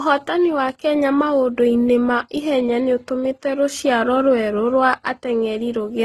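Throughout, the speech carries layered, swirly coding smear and nothing above 15.4 kHz, likely from transcoding between lossy codecs: low-rate HE-AAC re-encoded to Opus.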